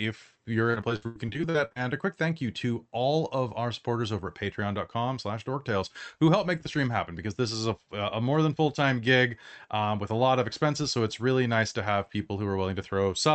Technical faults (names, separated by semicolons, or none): repeated packet loss (robotic sound)